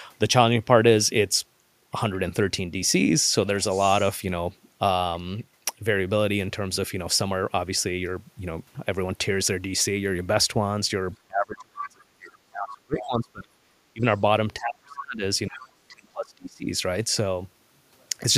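From 11.28 to 13.75 s, and again at 13.93 to 14.04, 14.58 to 15.23, 15.47 to 15.70 and 15.88 to 16.67 s, the speech is suppressed in double talk. It sinks by roughly 20 to 35 dB at its deepest, likely because the echo canceller mistook the overlap for echo. Unlike a network dropout, the level dips and recovers.

The other side's voice leaks through at 12.98 to 13.05 s, 14.69 to 14.95 s and 15.62 to 15.69 s. These are brief scraps well below the talker, likely loudspeaker echo the canceller left behind. They sit inside the suppressed stretches, which separates them from crosstalk on the line.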